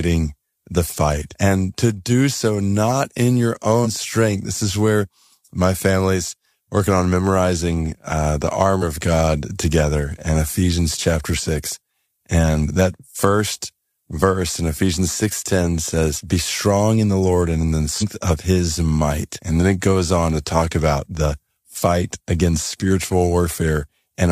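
Compressed frames skipped occur at 3.81–3.87 s, 8.78–8.82 s, 11.34–11.40 s and 17.98–18.03 s. Whole 46.4 ms frames of the coded stream never reach playback, either because they are missing or because the decoder rejected them as damaged, so the speech lurches forward past the gap. The jumps cover roughly two frames (about 100 ms), two frames (about 100 ms), one frame (about 50 ms) and, in the longest, about seven frames (around 300 ms).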